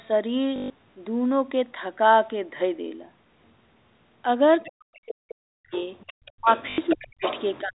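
At 0.56 s the sound breaks into a short robotic stutter lasting 0.14 s. This is packet loss with the last packet repeated. The receiver kept replaying the final packet it had while about 140 ms of audio was missing. The repeats do not line up with the pitch period, and the run buzzes near 50 Hz, which fits 20 ms packets.

At 4.61 to 4.71 s a faint second voice appears, about 25 dB below the main speech. This is the other side's voice leaking through, most likely because the echo canceller left some of the loudspeaker signal in the microphone path.

Starting at 4.69 s and running to 5.73 s, the talker's speech is likely suppressed in double talk. Over roughly 0.7 s within that span the level dips in pieces, by as much as about 40 dB, as the canceller attenuates both voices together.

From 5.71 s to 7.38 s the leak returns much stronger, about 10 dB under the speech.

During that overlap the speech is pushed down again by about 40 dB at 6.33 to 6.48 s.

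At 6.70 s a second repeated-packet stutter, 80 ms long, produces the same buzz.

Further suppression, likely from double talk, cuts the speech at 6.95 to 7.23 s and again from 7.62 s to the end of the clip.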